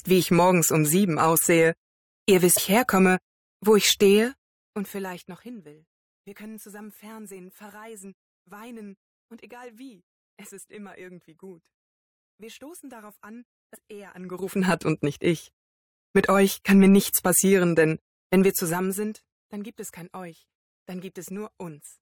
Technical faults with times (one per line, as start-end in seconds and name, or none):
14.12-14.72 zipper noise